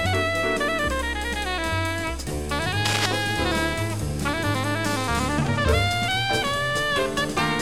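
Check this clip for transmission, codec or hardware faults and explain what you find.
One hardware fault is audible: cable scratch noise, from 2.85 to 3.06 s. A worn cable, plug or control was likely being moved, so its contact resistance jumped about rapidly and let irregular bursts of noise into the signal. Across those two-tenths of a second, a dense, uneven scratching and rustling sits over the sound at roughly the same loudness as the sound itself.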